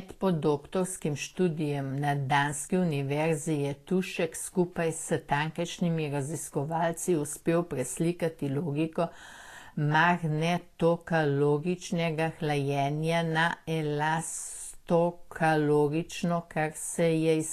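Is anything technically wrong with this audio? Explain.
Yes. Throughout the speech there is plainly audible damage consistent with Vorbis compression, the likely cause, at a low setting that fits roughly 35 kbps. Nothing is present above 14.2 kHz, because the encoder has pulled its cut-off down. Below that limit, the treble residue sitting on the coded spectral floor has been quantised so coarsely that its fine structure is replaced by noise of similar energy. The result is a hissy, grainy top end, roughened tonal parts and softened consonant onsets.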